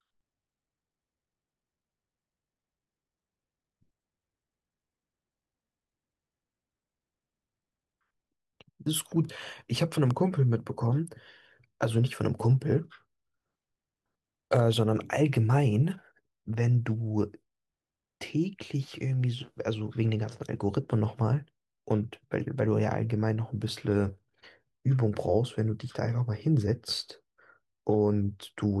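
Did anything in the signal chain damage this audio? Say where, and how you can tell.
Yes. Sharp loud pops at 10.11–10.13 s and 14.56–14.58 s jump above the speech, which continues underneath; likely a voltage step in the analogue wiring.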